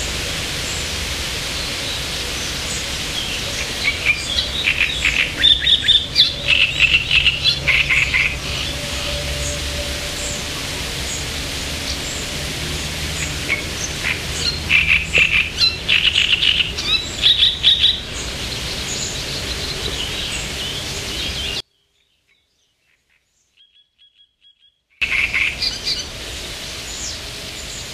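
From 21.60 to 25.02 s, one stereo channel has likely been inverted, so the content common to both channels cancels when they are summed to mono. The sounds nearly disappear, falling by about 39 dB, before returning at full level.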